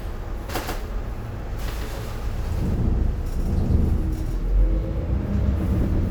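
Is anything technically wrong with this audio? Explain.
Yes, there's a doubled audio track running the whole way through. A second full-band copy of the sound trails the original by roughly 150 ms, sitting about 5 dB quieter. That's likely from the signal being picked up twice, once through a slower path, or from two out-of-step copies left stacked in an edit. Every onset gets a dry, distinct repeat with no decay or room colour, more like a slapback than real reverberation.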